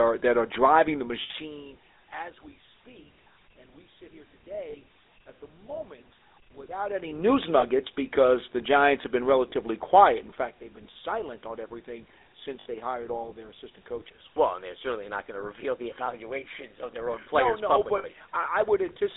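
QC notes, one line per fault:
Throughout, GSM full-rate codec: the band runs only from about 300 Hz to 3.7 kHz, and a plainly audible buzzy, gravelly roughness comes from a vocal-tract model driven by regular pulses that keep just every third excitation sample, consistent with 13 kbps full-rate GSM.
1.22–1.31, 4.70–4.75, 7.60–7.65, 9.50–9.54, 12.60–12.66 and 17.98–18.05 s, lost GSM frames: gaps of 80, 40, 20, 20, 60 and 60 ms are filled by repeating the last good frame's settings, which gives a brief rough, metallic ring. None reaches a third of a second, so none is cut to silence.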